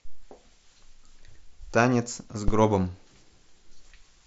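At 2.48 s a phantom power thump breaks into the speech and lasts until about 2.68 s. A supply voltage was switched on a live input, and the sudden step passed through the coupling capacitors as a deep, dull knock that dies away within roughly 45 ms. On the waveform it shows as a large one-sided excursion with a fast exponential tail. The spectrogram shows a bright vertical smear concentrated at the lowest frequencies, sitting below the speech band that tops out near 7.9 kHz.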